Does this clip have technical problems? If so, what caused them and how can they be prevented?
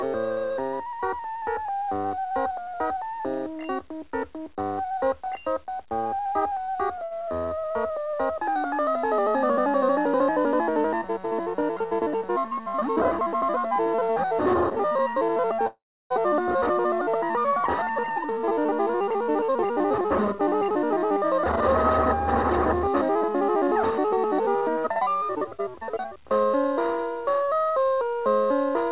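Yes. At 7.04 s, in a short stall from a late packet, one packet missed its playout time and the jitter buffer ran dry. The receiver stretched the last sound for 68 ms until it arrived, then carried on from the same point, leaving a briefly held, slightly buzzy sound with nothing lost. A slightly deeper jitter buffer target would absorb such delays.

From 15.67 to 16.13 s there is a call audio freeze, likely caused by packets held up in the network, which emptied the buffer. A fading continuation of the last sound gives way to about 310 ms of silence, 436 ms of inserted gap in all, before the audio resumes where it stopped. Better network priority for the call traffic, or a more stable route, would prevent it.

Jitter buffer speed-up follows from 17.90 to 21.43 s and from 22.74 to 24.17 s. The buffer held more audio than it aims for, so the receiver trimmed short pitch-period pieces again and again, cutting around 0.3 s and then around 0.15 s. 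The sound runs 7% and then 9% fast at unchanged pitch and feels hurried. A gentler catch-up rate, or fewer delay bursts, would avoid it.

The call codec path, G.711 A-law, carries nothing above 4 kHz.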